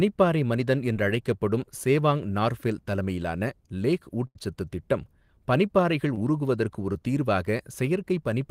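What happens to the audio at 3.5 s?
Nothing goes wrong at 3.5 s; the audio is intact and continuous through that moment.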